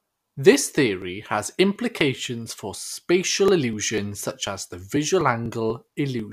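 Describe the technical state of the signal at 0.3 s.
Right at 0.3 s you're inside a run of periodic USB or driver dropouts, 0.28 to 6.20 s: every 0.25 s around 4 ms of speech gets skipped, ticking steadily.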